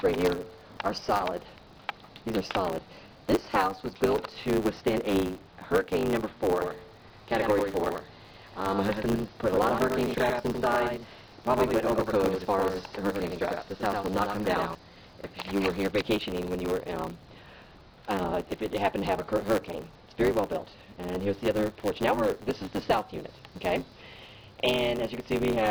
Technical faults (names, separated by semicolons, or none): block size mismatch (truncated); doubled audio track; chunks out of order